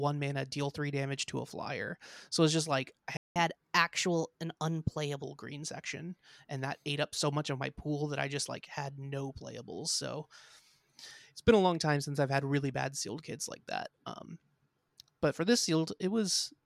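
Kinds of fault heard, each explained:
Playback stall: Right after "it's just like I", the speech cuts to silence at 3.17 s for about 0.19 s, then resumes. The player likely ran short of data or its thread was blocked, so output halted until it recovered.
Catch-up at higher speed: From 3.36 s to 5.23 s, up to "green section and that", the speech runs 1.1 times fast. Pitch rises about a semitone and a half. The player resamples its backlog to regain lost time, then returns to normal.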